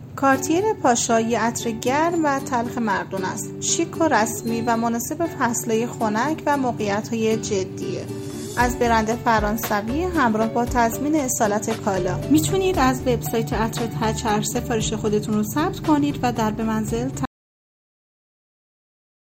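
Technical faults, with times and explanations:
17.25–19.35 s, audio dropout to silence: sound cuts off abruptly to total silence through the end, likely a lost input link; the waveform goes flat and the spectrogram goes completely blank.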